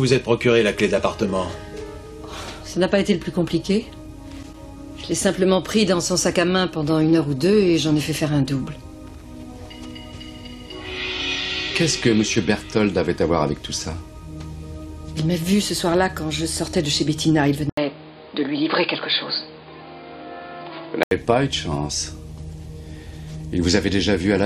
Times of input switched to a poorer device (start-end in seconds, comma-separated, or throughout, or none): 17.69-21.11